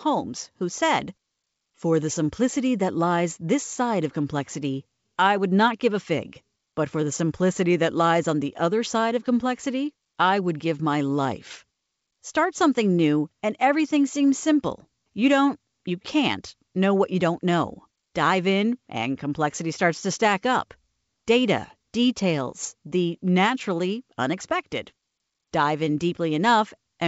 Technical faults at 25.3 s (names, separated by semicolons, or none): none